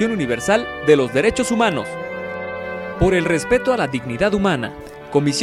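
Nothing goes wrong anywhere in this audio, so there's no technical fault to point to at any moment.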